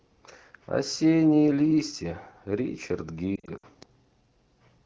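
From 3.36 to 3.66 s, lost AMR speech frames break up the speech. Radio errors made frames fail their checks, so the decoder filled each gap by reusing the last good pitch and vocal tract settings at falling gain. The losses are scattered across about 280 ms, adding up to roughly 140 ms, which points to about seven 20 ms frames. The longest run is 60 ms. A single lost frame sounds like a brief dip or warble, the longer run drops to near silence, and the speech returns weak or rough for a moment.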